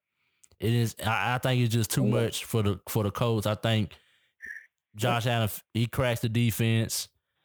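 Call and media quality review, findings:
Crude rate conversion, 0.66 s to 6.23 s. Gritty, inharmonic fizz riding on louder and brighter speech, roughly 25 dB down. Probable component: resampler, pointing to 44.1 to 48 kHz via nearest-sample repetition, no filtering. Unlike codec artefacts, the grit follows signal level with a fixed, periodic repeat-pattern character, and stops outside that span.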